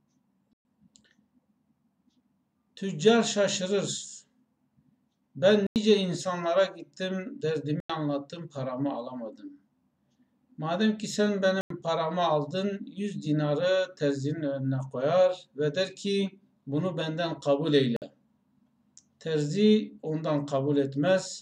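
Blocks of digital silence hit at 0.53 s (118 ms), 5.67, 7.80 and 11.61 s (93 ms each, fitting a 4096-sample buffer), and 17.96 s (54 ms). Output buffers likely went unfilled. Each gap is a short hole.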